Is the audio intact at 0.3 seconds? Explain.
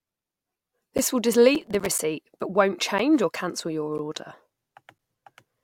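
Yes, at 0.3 seconds the speech comes through intact, with no dropout, click, distortion or other fault audible at that moment.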